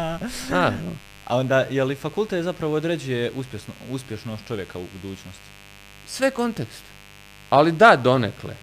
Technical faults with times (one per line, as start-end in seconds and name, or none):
0.00-8.63 mains buzz